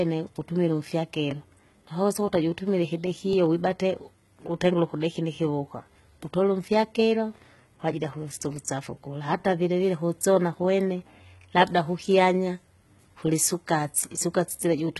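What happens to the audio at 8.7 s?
At 8.65 s there is a pre-echo lasting about 12 ms. A transform codec spreads its quantisation noise across a whole block, so noise scaled for a sharp attack leaks into the quiet moment just before it. The attack gets a brief hiss ahead of it and sounds smeared rather than crisp. On a waveform, a thin band of low-level fuzz rises just before the onset; on a spectrogram, a faint broadband smear appears ahead of the vertical attack line.

Around that moment, as across the whole speech clip, there is heavy damage from what is likely HE-AAC compression. The sound points to a low bitrate of around 16 kbps. Only the lower spectrum is truly coded, and the treble is rebuilt by copying lower bands upward under a coarse envelope, so s sounds come out gritty or lispy. A spectrogram shows nothing above 11.8 kHz and blocky, repeated-looking texture in the upper bands, with harmonics that don't line up across the crossover.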